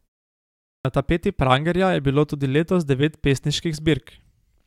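At 0.78 s, after about 0.78 s of silence from the start, the speech enters with a clipped start after a pause. The output device appears to have dropped into a sleep state during the quiet and needed time to wake and lock again, so the first 68 ms of sound, up to 0.85 s, is swallowed. The first word begins abruptly, missing its opening sounds. Unlike a muted pause, where only background fades and returns before speech resumes, here speech itself is lost.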